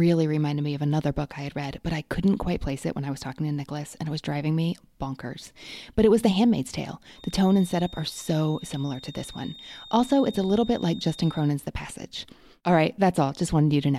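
From 7.08 to 11.55 s a feedback whistle near 3.7 kHz sits roughly 20 dB below the speech, swelling and fading slowly in level. It is likely a loudspeaker-to-microphone loop held just short of runaway; unlike a ringing resonance, it neither decays nor builds into a howl.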